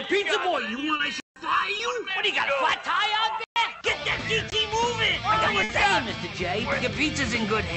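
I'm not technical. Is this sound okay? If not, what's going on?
No, there are a few problems, mostly in the first two seconds.

From 0.58 to 2.10 s there's channel delay (comb filtering). One side of the stereo signal runs a hair behind the other, under a millisecond, and when the two are mixed into one they partly cancel at a regular set of pitches, starting around 700 Hz. The result sounds hollow and phasey, a bit like listening down a tube, and then it clears up after 2.1 s.

Inside that stretch there are two short concealed packet losses, at 0.97 to 1.01 s and 1.77 to 1.81 s. Each time about 20 ms of the call didn't arrive in time, so the receiver patched the gap by stretching out whatever sound came just before and blending back in. You'd notice a tiny smear or wobble, and a very short sound could get swallowed.

There are also three blocks of digital silence, at 1.20 to 1.36 s, 3.44 to 3.56 s, and a very short one at 4.50 s. 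The audio simply drops to silence and comes back with no fade. The two longer ones, 160 and 120 ms, come across as clear little holes, and the one at 4.50 s is a very short hole of about 19 ms.

Finally, there's a burst of packet loss at 5.63 to 5.71 s. About 60 ms went missing in a row, so the receiver filled in by carrying the last sound forward and letting it fade, which gives a brief buzz or hiss. When the real audio returns it has skipped ahead, so that small piece is gone.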